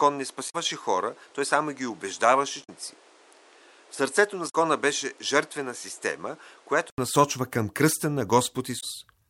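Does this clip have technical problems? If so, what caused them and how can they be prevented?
Yes. From the start until 6.98 s the speech is dull, with nothing above 11.4 kHz, a noise floor about 30 dB below the voice, and a level about 5 dB lower. At 6.98 s an 80 ms silence leads into clearer sound. The likely cause is an input switched to a poorer device. Unlike a low-pass filter, it also changes level and noise. Lock the input device before recording.

Damaged data in a compressed stream causes brief glitches at 0.46–0.55 s, 2.60–2.69 s, 4.46–4.55 s and 8.77–8.83 s. The decoder misreads corrupted frames and resyncs at the next header. Dropouts would be silent instead. Use checksummed transport and verify files after transfer.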